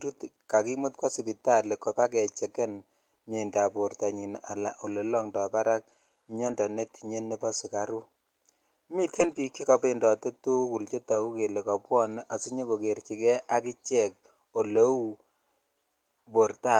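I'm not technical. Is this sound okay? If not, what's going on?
No. The speech has seven brief rough patches, each a lost packet rebuilt from error correction. Pieces of the audio went missing in transit, and the receiver filled each gap with a lower-quality backup copy, so nothing drops out but those moments sound grainy. They occur at 2.03–2.05 s after "kakimut kwo sipitali", 5.17–5.19 s after "alaan olee", 6.47–6.53 s, 9.15–9.37 s (the longest), 11.11–11.17 s between "biik chekopendote tukul" and "kelee kobwone", 12.45 s, and 14.75–14.77 s.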